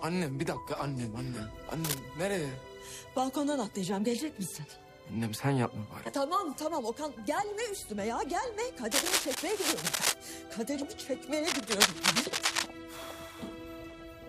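At 1.84 to 2.01 s, a short burst of cable scratch noise rustles over the audio, about as loud as the sound itself. Longer, louder bursts follow at 8.91 to 10.14 s and 11.46 to 12.66 s. A worn connector or cable being moved is the likely cause.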